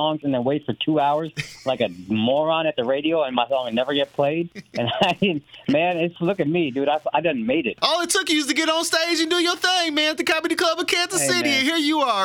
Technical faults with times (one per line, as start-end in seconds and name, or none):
0.00-12.25 Wi-Fi interference